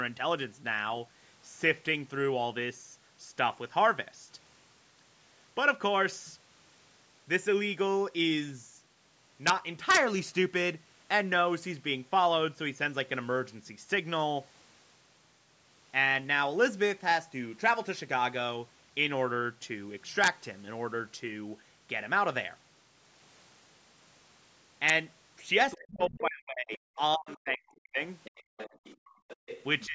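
Speech, with integer overflow at 9.47–9.50, 9.90–9.97, 20.24–20.28 and 24.89 s: loud peaks exceed the limit by about 1 dB and wrap to the opposite sign, giving violent cracks far harsher than clipping. Other side's voice leaking through appears as faint scraps at 25.71–25.77 and 27.30–27.36 s, roughly 20 to 25 dB below the talker, and more strongly, around 15 dB down, at 28.24–28.96 and 29.28–29.63 s, likely from loudspeaker echo the canceller failed to remove. Speech suppressed in double talk runs from 25.76 to 28.0 s, with dips of up to roughly 40 dB over about 1.5 s, and returns briefly from 29.86 s to the end at around 25 dB, likely the canceller ducking the talker along with the echo. Background gated by the echo canceller drops the room sound by about 40 dB at 28.43–28.57 and 28.96–29.38 s while the loudspeaker plays. The call's microphone processing removes the deepest bass, and nothing above 8 kHz is present.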